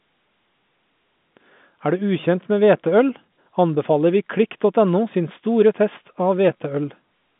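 No technical faults can be heard anywhere in the speech. It arrives over a working G.711 A-law telephone path at 64 kbps, so the sound sits within a line band of 150 Hz to 3.6 kHz, with nothing above 3.8 kHz.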